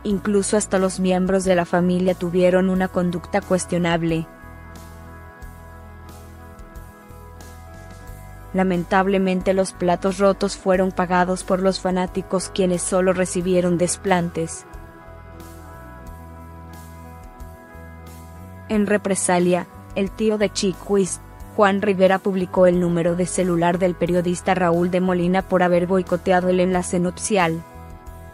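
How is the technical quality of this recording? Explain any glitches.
The recording has three brief glitches. Dropped buffer (overrun) at 2.08 s, 7.11 s and 13.79 s: each is a point where the sound jumps ahead, skipping roughly 15 ms, 15 ms and a few milliseconds. The likely cause is samples being overwritten before they were read, so the audio on either side is joined with no gap.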